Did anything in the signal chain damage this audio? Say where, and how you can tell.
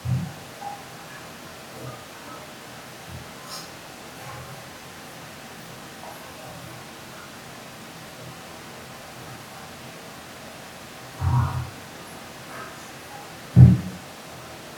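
No, nothing in this speech recording points to damage at any stage of the signal chain.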